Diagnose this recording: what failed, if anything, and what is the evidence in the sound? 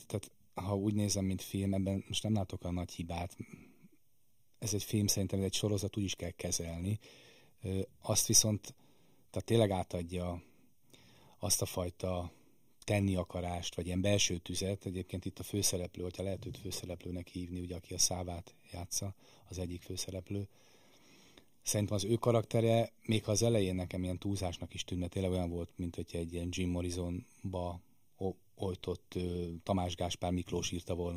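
The speech sounds hollow and phasey from start to finish, with a fixed, tube-like coloration that never moves. That is channel delay (comb filtering): one channel arrives around a third of a millisecond late, only a few samples, and the two are summed to mono. Content common to both cancels at evenly spaced frequencies, with the first notch near 1.5 kHz and further notches repeating about every 3 kHz. The stage is the driver or buffer path feeding the mono fold-down.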